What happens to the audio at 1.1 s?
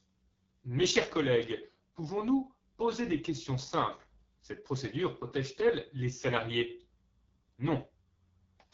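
At 1.1 s the speech is carrying the AMR wideband (HD Voice) codec, which is present across the whole clip rather than starting there. The codec models the voice as pulses driving a vocal tract filter and replaces the top band with shaped noise, and at this depth of damage, which fits the lowest 6.6 kbit/s mode, the result is rough and raspy. Nothing is heard above 7.6 kHz.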